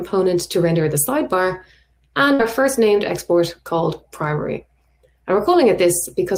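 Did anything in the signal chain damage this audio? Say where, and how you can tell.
Yes. At 2.33 s the audio stops moving forward. The last sound is stretched into a held, decaying tail that fades for about 56 ms before the signal resumes at 2.41 s, with roughly 60 ms of material skipped. That is a burst of packet loss at the network stage. Several consecutive packets never arrived in time, so the receiver's concealment extended and faded the final fragment, then jumped ahead to the next packet that did arrive.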